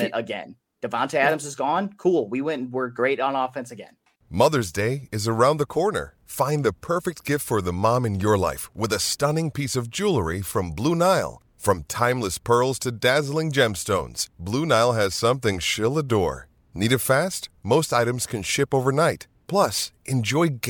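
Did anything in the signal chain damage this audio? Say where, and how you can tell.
No, nothing in the chain.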